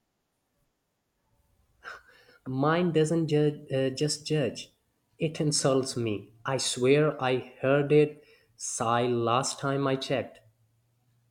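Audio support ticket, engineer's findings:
No faults found in this speech clip; nothing to report for the ticket.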